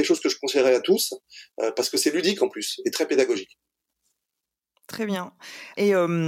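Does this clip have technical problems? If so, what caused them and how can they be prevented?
No, there are no technical problems to prevent here.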